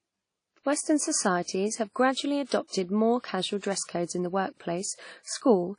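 Likely WMA compression, fitting about 32 kbps, smears quantisation noise over long blocks, so the speech rings and sounds washy throughout, with breathing hiss.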